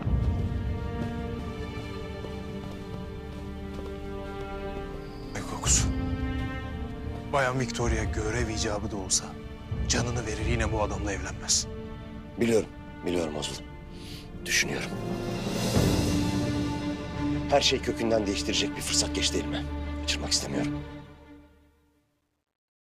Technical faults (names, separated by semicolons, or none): compressed frames skipped; truncation distortion on a fade